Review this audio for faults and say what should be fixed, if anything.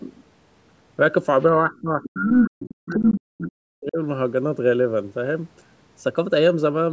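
Between 1.54 and 3.98 s the talker's speech sinks and breaks up, with gaps totalling around two seconds and the deepest dips falling by roughly 40 dB, so parts of the speech all but vanish. This is speech suppressed in double talk, likely caused by both ends speaking at once. The echo canceller could not tell the near talker from the loudspeaker echo, so it treated both as echo and pulled the level down. Preventing it needs a canceller with better double-talk detection that keeps near-end speech open rather than gating it.

Inside that same stretch, brief fragments of a second voice break through at 1.73–1.81, 2.02–2.10, 2.28–2.44, 2.68–2.87 and 3.12–3.20 s. Some are barely audible, and the one at 2.28 s is slightly louder than the talker. This is the other side's voice leaking through, likely because loudspeaker playback reached the microphone and the echo canceller left residue while it was busy during double talk. 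The call's normal band limit leaves nothing above 8 kHz. Better acoustic isolation or a headset, together with a faster-converging echo canceller, would stop the leakage.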